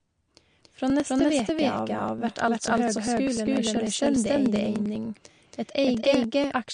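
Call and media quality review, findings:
Doubled audio track: full speech heard twice throughout, second copy roughly 300 ms behind at about equal level. Likely a second capture path or misaligned edit. Unlike echo or reverb, the copy has no decay or room colour.

MP3 compression: watery, swirly speech with smeared onsets and chirpy sibilants throughout; nothing above 9.8 kHz. Likely a low-bitrate MP3 encode, consistent with about 48 kbps. Unlike a plain low-pass, weak spectral detail flickers frame to frame.

Periodic USB or driver dropouts: regular ticks from 0.11 s to 6.64 s, every 0.099 s, some seventy in all. The bus or driver stalls and skips about 1 ms of audio each time. Evenly spaced and only audible under signal, unlike codec artefacts.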